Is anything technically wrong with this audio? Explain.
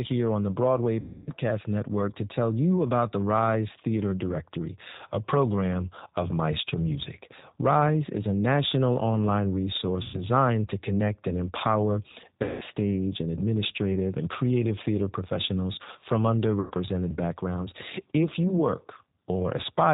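Yes. Throughout the clip the speech has passed through a G.729 codec, a low-rate VoIP coder whose roughness suggests about 8 kbit/s. Instead of transmitting the waveform, it sends a vocal tract filter, a pitch predictor and a handful of pulses per frame, and the decoder rebuilds the speech from these. The damage is plainly audible: nothing above 4 kHz survives, so the sound is muffled and band-limited, with a rough, slightly synthetic texture.

There are also four places where VoIP packet loss was concealed by the speech codec: 1.00 to 1.31 s (about 270 ms), 10.03 to 10.22 s (110 ms), 12.43 to 12.64 s (180 ms) and 16.60 to 16.72 s (100 ms). With packets missing, the decoder keeps repeating its last pitch and filter at a steadily falling gain. The speech smears into a fading buzzy tone or coloured noise. Because each frame builds on the one before it, the speech stays weak or distorted for a short while after real data returns.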